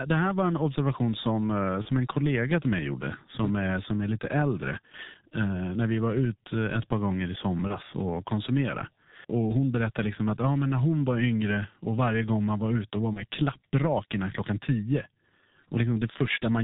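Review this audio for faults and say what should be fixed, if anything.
The whole clip runs through the G.723.1 codec at 6.3 kbit/s. Its 30 ms frames and 4 kHz ceiling leave the speech muffled, hoarse and smeared on consonants.

You'll also hear VoIP packet loss concealed by the speech codec three times. At 1.82–1.88 s, after "en observation som eh", at 7.67–7.77 s, after "ett par gånger i", and at 13.13–13.23 s, after "man var ute var", the decoder stretches its last frame into a fading buzzy tone or coloured noise. Each gap fits one lost 30 ms frame.

To fix it, carry the call on a wider-band codec at a higher bitrate and add jitter buffering or forward error correction against the drops.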